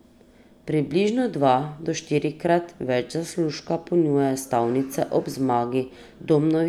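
No faults turn up anywhere in this speech recording; nothing breaks in, drops out or gets mangled from the first moment to the last.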